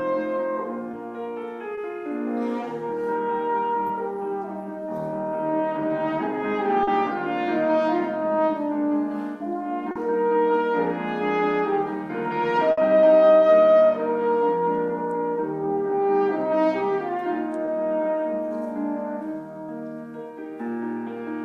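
Brief smears or wobbles interrupt the sound at 0.91, 1.75 and 3.87 s, then at 6.83 and 9.91 s, and again at 17.65 s. This is short concealed packet loss: packets arrived too late or not at all, and the receiver extended the preceding sound to cover each gap. It covered about 20 ms at most points and about 40 ms at 6.83 and 9.91 s, then blended back into the real audio.

From 12.71 to 12.79 s the sound turns into a held buzz or a hiss that fades, and then picks up a little further on. This is a burst of packet loss. Several consecutive packets went missing, so the receiver stretched the last sound across roughly 60 ms and lowered its level as it went. It then resumed with about 60 ms of the original gone.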